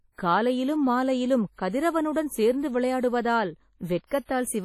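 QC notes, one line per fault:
throughout — WMA compression: the speech has a ringing, washy quality, with a hiss that swells and fades along with the signal, and nothing is heard above about 17.3 kHz. This is likely a WMA encode at a low bitrate, around 32 kbps, where long transform blocks smear quantisation noise over tens of milliseconds and weak spectral lines are dropped. Unlike a single pre-echo, the damage is heavy and present everywhere rather than clustered before attacks.
1.55–1.58 s and 4.07–4.11 s — pre-echo: just after "காலையிலும் மாலையிலும்" and after "சேர்ந்து விளையாடுவதால்", a brief hiss runs ahead of a sharp onset, spreading 35 ms and 47 ms respectively, and the attack sounds softened. The transform block containing the attack spreads noise sized for the loud part across its quiet start, so the hiss arrives before the event, unlike reverb or ringing, which trail after it.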